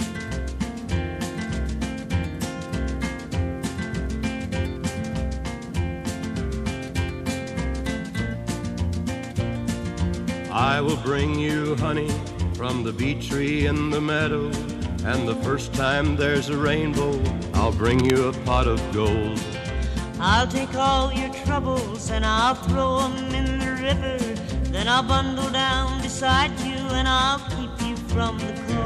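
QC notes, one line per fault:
17.91 to 18.14 s, cable scratch noise: A short burst of dense, ragged crackle sits over the sound for about a quarter of a second. It is about 10 dB below the signal and is heard as scratching. The bursts are uneven, not a steady hiss. This likely came from a worn cable or connector being moved. Its contact resistance jumped about rapidly and added bursts of noise to the signal.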